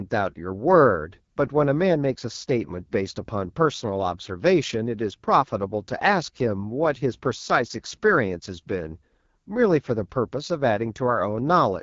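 Throughout, AMR wideband (HD Voice) codec damage makes the speech rough and raspy, fitting 8.85 kbit/s; spectrograms show a hard ceiling near 7.4 kHz.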